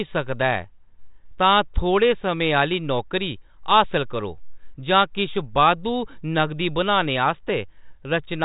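Nothing stood out on listening to this speech, which comes through G.726 ADPCM coding at 40 kbit/s with the band stopping near 3.8 kHz.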